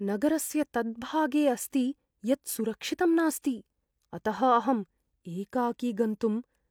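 No technical faults can be heard anywhere in the recording.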